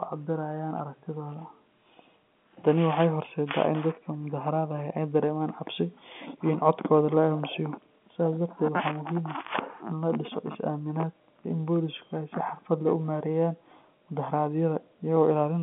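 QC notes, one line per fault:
No faults are audible; the speech comes through a G.711 telephone path, band-limited to about 150 Hz to 3.4 kHz with nothing above about 3.7 kHz, and its coding noise stays faint beneath the signal.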